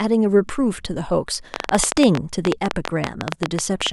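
From 1.54 to 3.88 s there's a train of clicks, around thirty irregular ticks at about 12 per second, roughly 20 dB over the speech, likely nearby interference.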